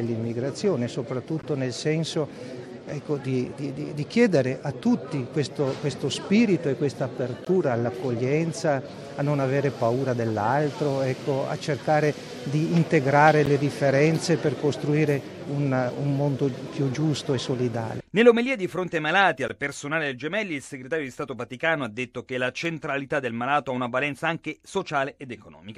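At 1.42, 7.45, 13.46 and 19.48 s the sound drops out abruptly for 15, 17, 12 and 16 ms respectively, with hard edges on both sides. These are gaps between stream segments. The time stamps of consecutive segments don't quite meet, so the player inserts silence to cover each hole. The six-second spacing matches the segment length. Nothing is missing from the audio. The silence is added, which pushes everything after it slightly later.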